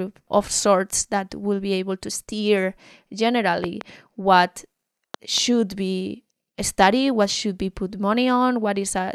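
Loud pops hit the speech twice, a quick double pop around 3.64 to 3.83 s and another just before "be studied what should" at 5.14 to 5.40 s, well above the level of the talking. Each is likely a brief voltage spike, say from static or a switch.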